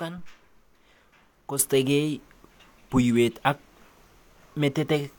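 Speech whose level steps up abruptly at 1.59 s by about 8 dB and stays there to the end: a sudden gain jump. Unlike a talker moving closer or an automatic gain control easing in, the change lands from one sample to the next with no ramp, and the background noise rises by the same amount as the speech. The likely cause is a digital gain setting or bit shift applied without smoothing.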